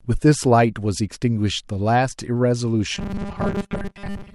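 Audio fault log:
2.95 to 4.35 s: robotic sound from repeated short buffers. The speech becomes a rigid, metallic 200 Hz buzz, which fits a 5 ms chunk being replayed over and over. Most of the real audio here is skipped, likely because new data arrived too late.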